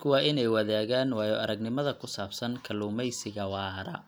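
Nothing in this bit of speech trips over itself anywhere along the way, so there's really no fault here to point at.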